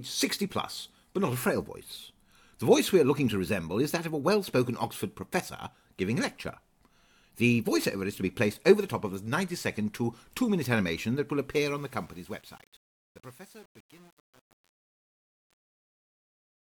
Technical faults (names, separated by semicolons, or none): truncation distortion on a fade